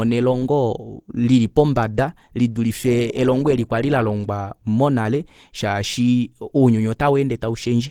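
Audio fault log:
Throughout, Opus compression. The speech sounds hoarse and muffled, with a rough, grainy texture, and the coding damage is plainly audible. The likely cause is a low-rate Opus encode, around 16 kbps, in the mixed speech-and-music mode. The lower band is coded like speech, which gives the hoarseness. The upper bands are filled in from folded lower bands or noise, which makes them grainy. The bandwidth stays full, with content reaching about 20.4 kHz.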